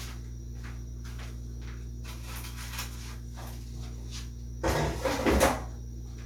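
No technical fault can be heard anywhere in this recording of sounds, and the signal holds steady from its first moment to its last.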